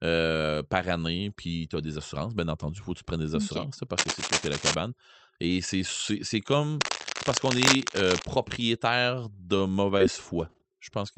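From 3.98 to 4.75 s, just after "tu prennes des assurances", cable scratch noise, likely from a worn cable or connector being moved, lays harsh rustling about 5 dB above the speech. On a spectrogram it appears as dense, ragged broadband smears. It returns from 6.81 to 8.33 s after "c'est comme", at about the level of the speech.

Within that second burst, from 7.57 to 8.13 s, scattered short gaps appear. Roughly four packets went missing, and each was patched by extending the preceding sound for no more than about 15 ms. They are heard as small ticks and hiccups and show as brief repeated or smoothed slivers in the waveform.

Short concealed packet loss follows at 8.49, 9.37, 9.98 and 11.14 s. Each time, about 20 ms of audio never arrived and was filled by continuing the previous sound. The result is a quick smear or tick, seen as a short stretch of flattened, repeated spectral texture.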